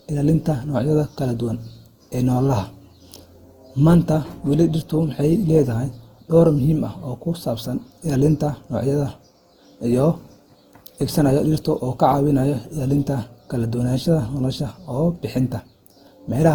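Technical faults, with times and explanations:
Throughout, generation loss: the speech sounds swirly, hollow and smeared, with consonant onsets softened well beyond what a single lossy pass would leave. The likely cause is repeated decoding and re-encoding, about five times, in a way that fits a 48 kbit/s Opus chain. Each pass quantises on a shifted frame grid, so noise and gaps accumulate. A spectrogram shows nothing above 20.2 kHz, and the waveform's transients look rounded and blurred.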